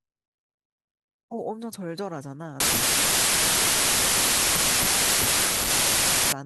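A wrong sample width fault runs from 2.60 s to 6.32 s. The speech was evidently stored as 32-bit integers but read back as packed 24-bit ones, so most sample values are stitched together from misaligned bytes and only some keep the top bits of the true signal. The result is loud, harsh noise with the speech buried underneath, playing at 0.75 times normal speed, so it sounds slowed and lower in pitch.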